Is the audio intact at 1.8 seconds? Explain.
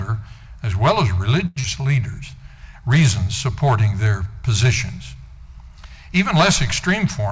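No, there's a jitter buffer slow-down from 1.82 to 2.00 s. Repeated pitch periods rebuild the reserve, adding 37 ms, so it drags at 84% speed, same pitch.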